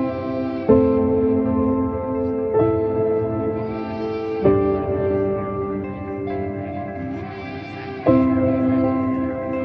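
No technical faults are audible.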